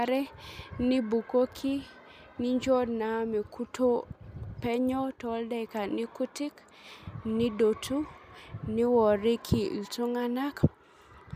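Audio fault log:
No audible faults detected.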